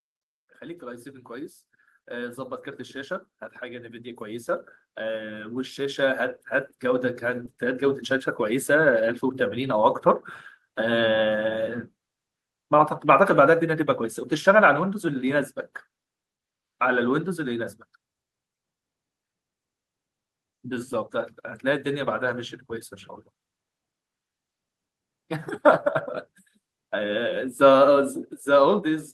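From 0.58 to 8.38 s, automatic gain rising lifts the level by about 17 dB. The gain control found the input too quiet. Speech and background swell together.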